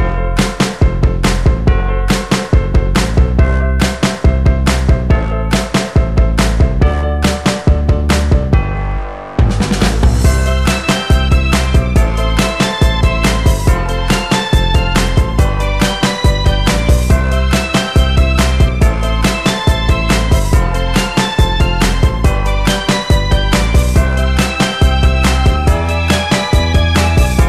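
No technical fault can be heard anywhere in this audio. Nothing in the sound calls for a technical explanation.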